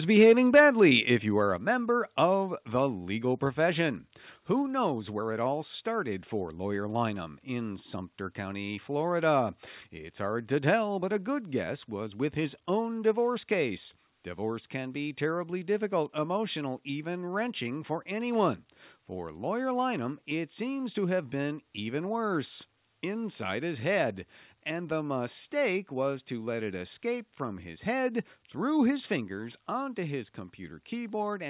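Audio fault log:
0.19 to 0.88 s, microphone overload. The loudest peaks in the opening second sound flattened and harsh, with a gritty crackle on top. The waveform tops are squared off, pushing about 4 dB past full scale, and a few percent of samples sit at the limit. The likely cause is an input level set too high, so the converter ran out of headroom. Cutting the peaks adds new harmonics, which is the rough edge heard here. It stays audible through the narrow telephone band, which holds nothing above 4 kHz.
0.57, 1.56, 4.62 and 29.16 s, microphone volume stepped down. Each time, the sound and its background drop together in a single step, with no fade. The first drop is about 3 dB, just before "if you are a", and it lands inside the clipped stretch. The second is about 4 dB, between "if you are a" and "member of the legal". The third is about 1 dB. The last is about 2 dB, between "his head through his" and "onto his". 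The call software likely cut the device input gain after it judged the microphone too hot.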